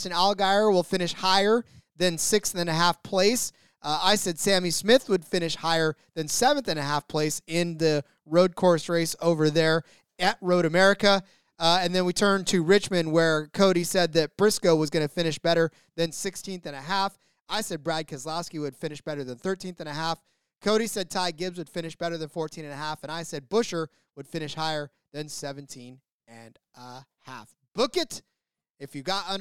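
A sudden gain jump at 16.06 s, right after "going to finish better", drops the speech and its background noise together by about 6 dB in a single step, holding there to the end. A gain change applied without any ramp is the likely cause.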